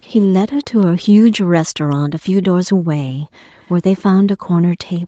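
Faint echo leak appears three times in this speech. It sits from 0.01 to 0.07 s, from 0.63 to 0.86 s, and from 3.59 to 3.73 s. A delayed copy of the voice trails the speech by about 157 ms. It is very quiet, roughly 30 to 40 dB below the speech, and strongest in the middle stretch. The likely cause is a far-end loudspeaker whose sound reached its microphone and slipped past the echo canceller.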